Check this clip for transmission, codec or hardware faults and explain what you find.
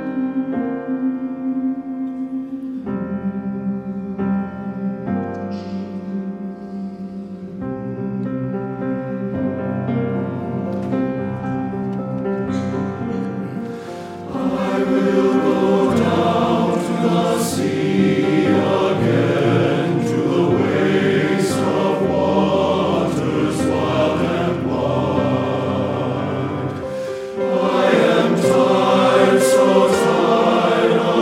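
Nothing in the recording points to a transmission, codec or hardware problem. There are no dropouts, glitches or distortion events to report anywhere in the clip.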